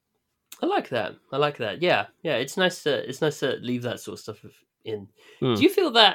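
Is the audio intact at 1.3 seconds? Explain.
Yes, the speech at 1.3 seconds plays through cleanly, with no dropout, click, distortion or other fault at that moment.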